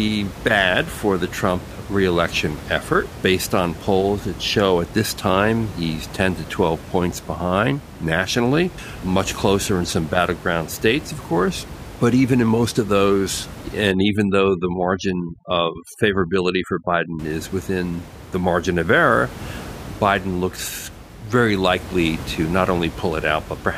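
From 13.92 to 17.19 s, after "in most of those" and before "is within the margin", overdone noise removal sets in: bands near the noise estimate are cut hard, so the room noise collapses into twinkling specks and the quieter speech detail goes with them.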